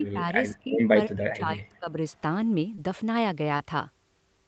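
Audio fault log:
0.00–0.28 s, 0.64–0.79 s and 1.06–1.98 s, speech suppressed in double talk: the level sags by about 10, 15 and then 30 dB, deepest in the long last stretch, likely because an echo canceller ducked this talker while the far side spoke. The waveform envelope visibly caves in there, and the spectrogram thins out, upper bands first.
0.06–0.10 s and 0.55–0.59 s, echo leak: faint scraps of the voice return 328 ms late, about 35 dB under the speech, likely loudspeaker pickup the far-end canceller failed to remove. On a spectrogram they appear as weak, delayed copies of earlier harmonic patterns; the waveform barely shows them.
2.75–2.79 s and 3.57–3.61 s, short concealed packet loss: each time about 20 ms of audio never arrived, and the decoder bridged the gap by extending the previous sound for roughly 20 ms before crossfading back. This is heard as a brief smear or wobble. The spectrogram shows the previous sound frozen and smoothed across that sliver.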